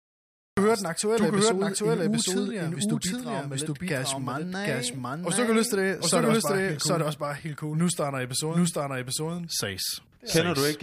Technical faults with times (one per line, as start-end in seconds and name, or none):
0.00-10.83 doubled audio track
0.00-0.57 cut-off start